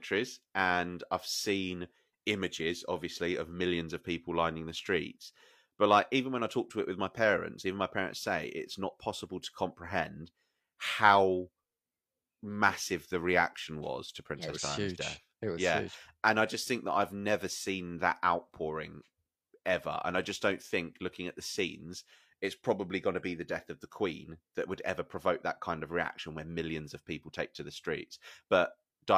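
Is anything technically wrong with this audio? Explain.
No, nothing technically wrong stood out on listening to this speech recording.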